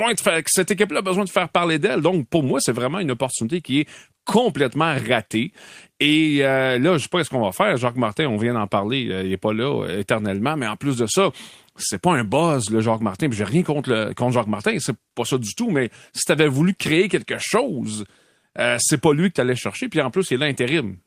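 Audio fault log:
No faults are audible in this speech recording. Nothing in it calls for an entry in the log.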